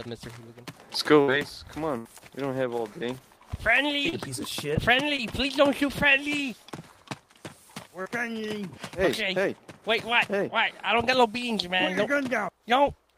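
At 1.21–1.30 s and 1.98–2.07 s the sound hangs as a fading buzz or hiss, then jumps ahead. This is a burst of packet loss: about 60 and 80 ms went missing, and the receiver stretched the last sound over each gap. At 4.09–4.14 s, 5.16–5.20 s and 8.02–8.07 s there are brief smears. These are short concealed packet loss, where a few hundredths of a second were patched from the preceding sound.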